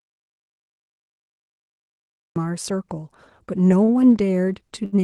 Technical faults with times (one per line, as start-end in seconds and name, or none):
0.00-2.36 audio dropout to silence
3.84-3.91 short stall from a late packet
4.85-4.95 short stall from a late packet
4.96-5.01 short concealed packet loss